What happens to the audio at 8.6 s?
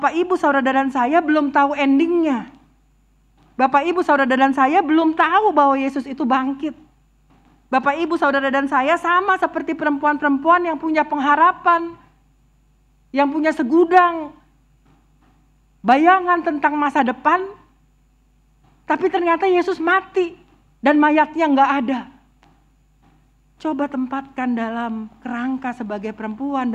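Nothing goes wrong at 8.6 s; the audio runs through that moment intact, with no dropout, click or other fault.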